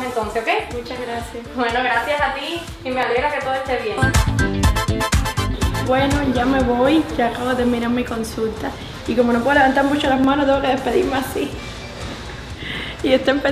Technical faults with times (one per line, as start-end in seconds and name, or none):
2.04 dropped samples
3.03 dropped samples
10.24 dropped samples
11.57 dropped samples